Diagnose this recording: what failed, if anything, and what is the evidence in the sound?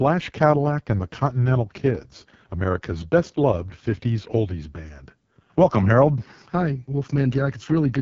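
The codec stage is where it went wrong: the whole clip has been through the AMR wideband (HD Voice) codec, and hard. The speech comes out rough and raspy from start to finish, which fits the lowest mode, around 6.6 kbit/s. Nothing sits above 7.4 kHz.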